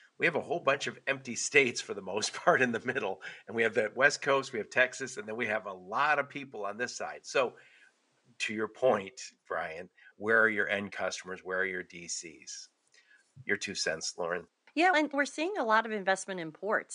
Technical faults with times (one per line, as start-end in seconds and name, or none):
none